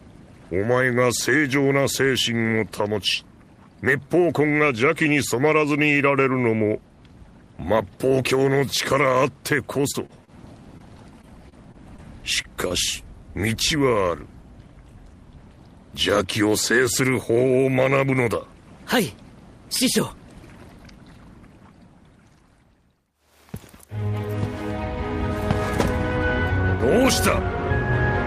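From 9.75 to 10.30 s there is repeated packet loss with a robotic sound: five gaps, the longest 29 ms, each patched by extending the last sound, so about a fifth of the stretch is synthetic. The gaps come close together, so the sound turns choppy rather than just blipping once. A second burst runs from 11.22 to 12.00 s, with four gaps of up to 28 ms and about a tenth of the span concealed.

Short concealed packet loss appears as single isolated holes of about 20 ms, at 10.78 s and again at 12.68 s. Each is filled once from the preceding sound and blended back. It is heard as a brief smear or wobble, with a sliver of real audio gone, not an ongoing choppiness.

At 12.42 s a short stall from a late packet holds the sound for about 23 ms while the jitter buffer waits. Playback then resumes from the same point, so nothing is lost. Unlike the concealed losses, this sounds like a slightly stretched moment with a faint buzz, not a missing piece.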